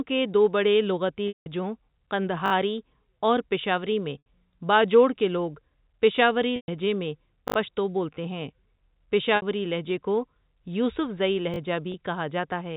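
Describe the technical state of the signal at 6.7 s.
At 6.7 s the speech is just coming back from a packet loss with pitch repetition. The gap runs from 6.56 to 6.68 s, about 120 ms, which fits six 20 ms packets. The receiver bridges it by repeating the last pitch period and fading that copy out over about 50 ms. The gap outlasts the fade, so a brief held buzz sinks into silence. Speech then returns through a short cross-fade, band-limited to 4 kHz by the G.711 telephone coding.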